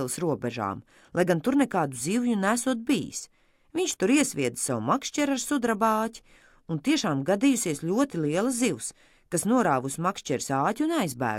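No technical faults can be heard anywhere in the audio. Nothing in the recording breaks, drops out or changes unexpectedly at any point.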